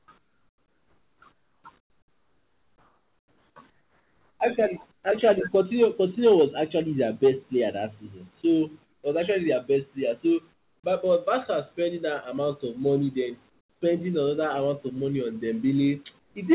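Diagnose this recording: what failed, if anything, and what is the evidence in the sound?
Call processing stage, comfort noise in place of the background: the real room tone becomes a steady, featureless hiss during pauses at 0.0–4.45 s, and about 8 to 12 dB quieter at 4.92–5.04, 8.84–9.04, 10.54–10.84, 13.50–13.82 and 16.20–16.36 s. Discontinuous transmission with receiver-generated noise is likely.

Call processing stage, onset clipped by the voice detector: at 10.82 s, as the comfort noise ends, speech begins abruptly and lacks its soft attack. The detector was likely slow to reopen, so about 20 ms of the onset never reached the receiver.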